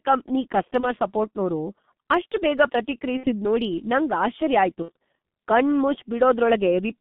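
G.723.1 codec damage runs through the whole of this speech recording. At about 6.3 kbit/s, the band is squeezed to roughly 150 Hz to 3.6 kHz and the voice model updates only every 30 ms, so the voice is heavily muffled and hoarse and consonants smear together. VoIP packet loss concealed by the speech codec appears at 0.80–0.87 s, 3.17–3.31 s and 4.82–4.90 s. The first gap fits one missing 30 ms frame and the later two fit about 60 ms each. The decoder stretched its last pitch and filter into a fading buzzy tone or coloured noise, and the voice stays weakened or distorted for a moment after each gap while the codec state recovers.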